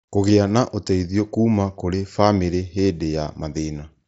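Nothing goes wrong anywhere in this bit of speech, which simply comes through the way a Bluetooth headset on the mSBC codec normally carries it, with the top end stopping around 7.7 kHz.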